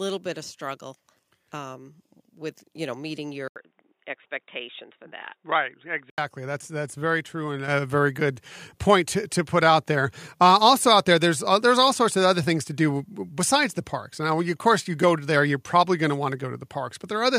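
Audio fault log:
3.48–6.18 s, input switched to a poorer device: just after "with you know meeting", an 80 ms gap and the sound turns boxy, with a narrower band and a new faint noise floor about 50 dB down at roughly unchanged level. The likely cause is a device change, not mere filtering, given the gap and the different tone.
7.68 s, microphone volume stepped up: between "that's very true and" and "very good point to", voice and background jump together by about 7 dB in one instant step. Unlike automatic gain riding, there is no gradual ramp and no later pumping back down.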